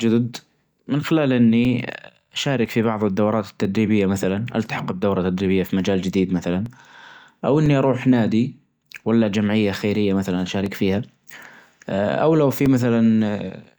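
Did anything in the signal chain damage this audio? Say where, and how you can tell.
Yes: periodic USB or driver dropouts every 1.0 s from 0.65 to 13.65 s, heard as regular ticks where a blocked driver silences about 2 ms.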